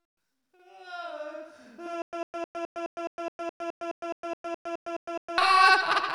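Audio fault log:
2.02 to 5.38 s, stutter with silent gaps. A burst of about 101 ms repeats 16 times, each followed by roughly 109 ms of digital silence, every 210 ms. The player likely stalled, replaying its last fragment at each retry. The sound meant for that span is lost.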